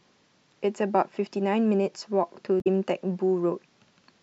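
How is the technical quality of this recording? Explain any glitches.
One glitch stands out in this speech recording. Damaged data in a compressed stream at 2.58 to 2.67 s: corrupted bytes made the decoder misread frames and lose sync, producing a brief glitch heard as a chirp, squawk, click or short gap.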